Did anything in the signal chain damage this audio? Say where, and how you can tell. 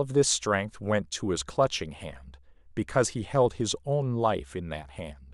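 No, nothing in the signal chain has damaged this speech recording. At no point in the clip does any stage between capture and playback leave an audible mark on the sound.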